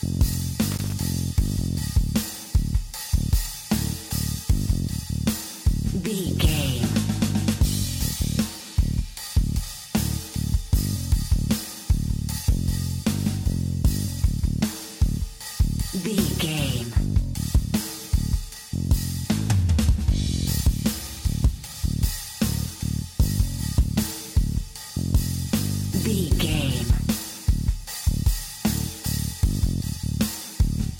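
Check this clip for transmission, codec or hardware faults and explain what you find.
There's one fault. From 0.72 to 0.92 s, loose connector crackle: a worn contact briefly makes and breaks, chopping the signal into an irregular scratchy burst.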